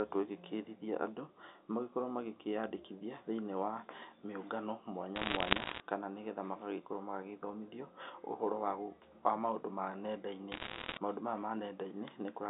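Bit errors on a digital phone line corrupt the G.711 A-law stream from 5.16 to 5.8 s, just after "makĩyandĩkithie thĩinĩ wa mĩũngano", and again from 10.52 to 10.98 s. Around 1.5 bits in a hundred flip, and each flip spoils a single sample, so sharp ticks and crackle sit over the narrowband speech.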